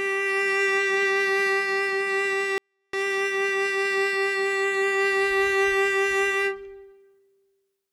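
A short music clip in which, from 2.58 to 2.93 s, the sound suddenly falls to near inaudibility for about 0.35 s and then returns at full level. This is a 24-bit alignment error (too quiet): samples held in the low 24 bits of a 32-bit word are read as full 32-bit integers, so everything sits about 48 dB down. Unlike a dropout or mute, the music continues underneath, faint but clean, with instant edges rather than a fade.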